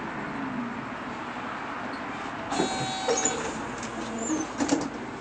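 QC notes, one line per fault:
No faults heard in this sound recording.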